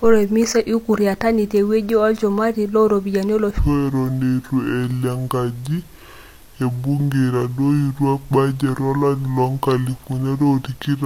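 A speech clip in which everything from 3.59 s to the end is a section at the wrong speed: just before "o lari loonkalifuni are" the voice abruptly drops and drags, running at 0.66 times normal speed, roughly seven semitones lower. The likely cause is a playback or editing clock mismatch. On a spectrogram, harmonics and formants shift downward and spread wider in time; the waveform shows syllables stretched out with longer, slower envelopes.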